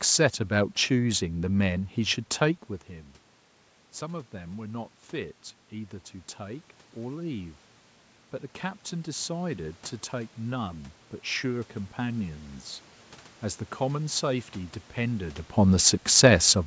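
From 3.99 to 7.58 s the automatic gain control, finding its input about 14 dB quieter after the talker moved away from the microphone at roughly 2.5 s, ramps its gain up by about 5 dB. This automatic gain rising is heard as a slow swell over those three and a half seconds: the speech grows louder and the room noise behind it rises by the same amount, so the background lifts along with the voice.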